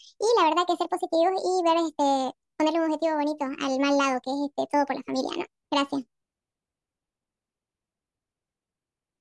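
Audio recorded at one sample rate is played back at a higher one with no conversion, a wrong sample rate that fits 16 kHz material run at 24 kHz. Throughout the speech, everything runs 1.5 times too fast and about 7 semitones sharp, sounding high and hurried.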